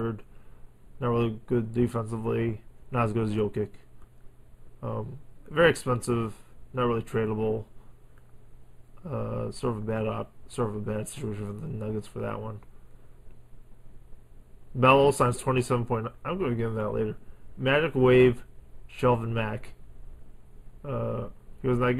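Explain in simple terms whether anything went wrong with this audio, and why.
Something did go wrong, and it lasts the whole clip: channel delay, also called comb filtering. One side of the audio arrives a tiny fraction late, about a tenth of a millisecond, or a few samples, and when the two sides are combined they cancel each other at regularly spaced pitches, the first near 5 kHz. That gives a hollow, dulled brightness. Unlike a simple treble cut, the loss sits in fixed notches, and unlike echo, there is no audible repeat.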